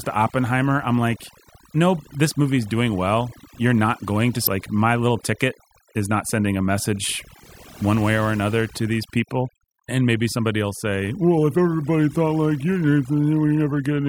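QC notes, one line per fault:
Throughout: overdone noise removal. The noise reducer was pushed way too hard, so any frequency band sitting near its idea of the noise floor gets pulled right down or switched off. Between phrases the background drops, with little twinkling specks where stray bands flicker on and off. The quieter parts of the voice get caught in the same net.
4.43–4.47 s: damaged data in a compressed stream. For about 44 ms the decoder is fed bad bytes, so it misreads or throws out the frames there, loses its place, and has to hunt for the next frame header before it can lock back on. You hear that as a short glitch.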